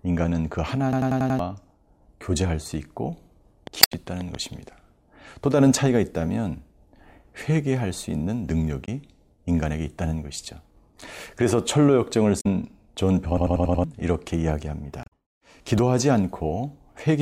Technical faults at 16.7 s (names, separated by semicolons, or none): none